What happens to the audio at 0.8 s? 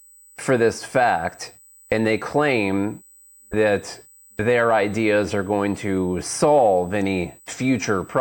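At 0.8 s the speech carries USB whine, a steady 8 kHz tone present from start to end of the clip, roughly 30 dB below the speech. The USB bus draws current in bursts every 125 microseconds, and that pulsing leaks into the audio through power or ground. Unlike mains hum, which sits at 50 or 60 Hz and its harmonics, this whine holds a high, fixed pitch at exactly 8 kHz.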